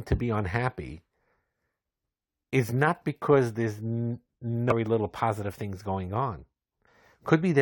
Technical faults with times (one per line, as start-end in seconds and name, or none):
4.70-4.72 damaged data in a compressed stream
6.86 damaged data in a compressed stream